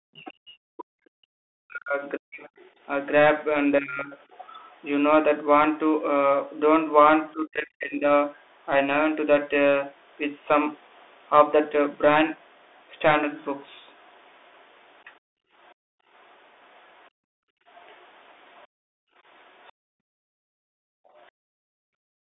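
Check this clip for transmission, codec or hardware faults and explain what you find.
Four faults are audible: a narrowband Bluetooth codec throughout, plus echo-canceller trouble in the form of suppressed speech, leaked far-end voice and a gated background.

Bluetooth CVSD headset codec, throughout. The speech is confined to roughly 300 Hz to 3.6 kHz. The codec sends one bit per sample at 64 kHz, stepping the waveform up or down with an adapting step size. The damage is plainly audible: s sounds turn scratchy, loud bright passages distort where the slope outruns the step, and a granular hiss sits under the voice.

Speech suppressed in double talk, 0.00 to 4.12 s and 7.33 to 8.06 s. The speech dips by as much as about 40 dB, for roughly three seconds in total in the first stretch and about 0.7 s in the second. The cause is likely an echo canceller that could not tell the talker from loudspeaker echo during overlap and pulled the whole signal down. 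The voice fades, thins and breaks into fragments.

Other side's voice leaking through, at 2.58 to 2.80 s, 4.31 to 4.90 s, 8.36 to 8.42 s, 11.00 to 11.04 s, and a long stretch from 12.79 to 21.22 s. A faint second voice sits about 30 to 40 dB below the talker. The loudspeaker playback was likely not fully cancelled from the microphone. The brief events come through as scraps, and the long stretch as a persistent faint voice underneath.

Background gated by the echo canceller, from 15.2 s to the end. During loudspeaker playback the microphone path is clamped hard. The room sound drops by as much as about 40 dB, for roughly four seconds in total, and returns each time the canceller releases. The result is a background that dips or drops out and then comes back.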